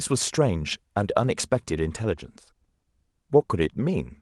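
No technical fault can be heard anywhere in the speech recording, and the signal holds steady throughout.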